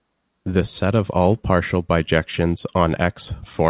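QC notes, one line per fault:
Nothing stood out on listening to this speech clip.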